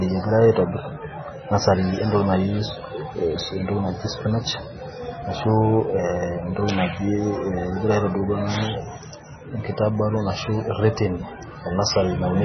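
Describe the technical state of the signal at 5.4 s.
At 5.4 s, as throughout the clip, the speech is likely starved of bits by MP3 compression at a very low rate, around 16 kbps. Nothing survives above 6.1 kHz, weak frequency lines flicker between frames into a watery swirl, and s sounds turn metallic.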